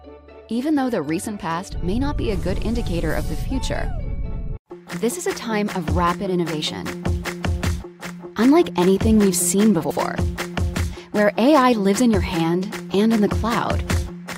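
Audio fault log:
9.84–9.97 s, frames out of order: a brief garbled flutter, as two neighbouring runs of about 64 ms each play in swapped order. The stretch is scrambled rather than lost, so timing holds.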